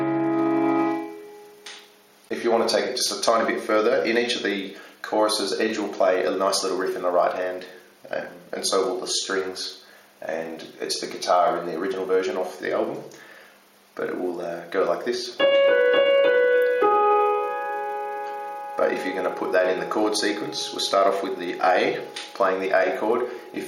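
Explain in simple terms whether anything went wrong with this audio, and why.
Yes, one thing: at 6.87 s there's a corrupt frame decoded, a brief blip where a damaged chunk of compressed data got played anyway, scrambling that instant.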